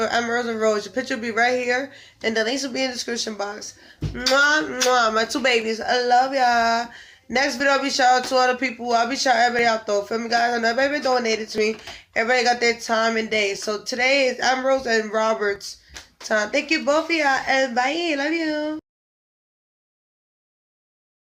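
Tiny skips fall at 1.63, 3.63, 5.62, 7.60, 9.59, 11.58 and 15.56 s. They come about every 2 s, which fits 2-second stream segments. Each is an overlap between stream segments. Two segments claim the same moment, so the player trims the shared stretch. Real sound is lost, between 5 and 17 ms each time. The waveform jumps across the cut. Each joint sounds like a brief tick or tiny skip.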